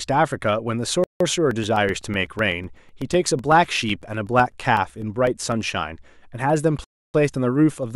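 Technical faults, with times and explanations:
1.04 to 1.20 s, Bluetooth stall: the sound cuts to silence for 165 ms and then resumes. The likely cause is radio interference delaying packets until the headphones' buffer emptied, so playback paused until the resent data arrived.
1.51 to 5.52 s, periodic USB or driver dropouts: about thirty brief gaps, each around 2 ms of silence, fall every 0.125 s, eight per second. A background task stalling the audio path at a fixed interval produces these evenly spaced ticks over the speech.
6.84 to 7.14 s, Bluetooth stall: a longer gap of 298 ms of silence, after which the audio picks up again. This likely has the same mechanism as the earlier pause: delayed wireless packets starved the playback buffer until retransmissions refilled it.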